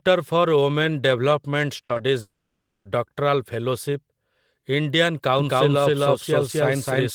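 A speech recording with three kinds of fault. Short concealed packet loss hits three times in quick succession, at 1.85 to 1.91 s, 1.93 to 1.97 s and 1.97 to 2.01 s. Each is a gap of 40 or 20 ms that the receiver filled by extending the preceding sound, so the speech briefly smears or wobbles. On a spectrogram these patches show harmonics or noise that run on too smoothly and then blend into the real signal, with small discontinuities at the joins.

Shortly after, from 2.21 to 2.87 s, there is a long network dropout, most likely from the connection stalling. The receiver stretches the last sound into a fading buzz or hiss, and about 0.15 s of silence follows before speech resumes with the missing portion gone. The waveform shows a decaying, repetitive stretch ending in a flat line, and the spectrogram shows smeared, fading bands and then an empty region.

From 5.39 s to the end there is a doubled audio track. 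A second full-band copy of the speech runs about a third of a second behind the original at roughly the same level. This likely comes from the audio being captured twice along paths of different delay. It begins abruptly, with no reverberant tail or room colouring. The spectrogram shows every syllable repeated as a shifted duplicate, and the waveform thickens into overlapping, equally strong bursts.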